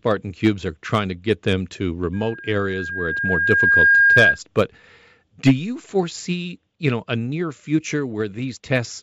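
Right after "to get them to", at 2.13 s, a loudspeaker feedback squeal kicks in: the mic's hearing its own speaker, and the loop runs away at 1.6 kHz. It swells over a second and a half or so, ending up about 10 dB over the speech, before dying at 4.39 s.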